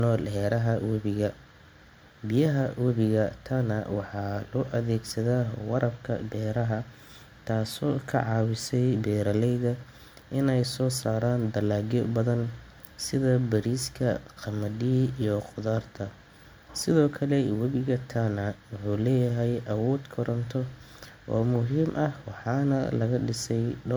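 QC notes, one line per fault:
Throughout, generation loss: the speech sounds swirly, smeared and hollow, with blurred attacks and nothing above 20.1 kHz. It likely comes from about three MP3 passes, pointing to 96 kbit/s, each requantising on a shifted frame grid so noise and spectral holes accumulate.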